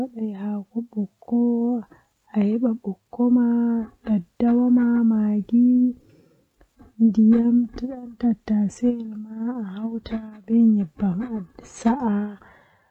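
No technical faults can be heard anywhere in the recording.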